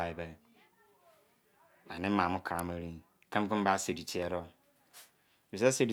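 At 2.59 s, just after "ani maamo", a sharp snap cuts through the speech. It is an electrical switching spike. The click is very brief, only a few milliseconds, and peaks at around -20 dBFS. It sits on top of the speech rather than replacing it. The likely cause is a nearby switch, motor or static discharge arcing. The audio line picked up that burst of interference.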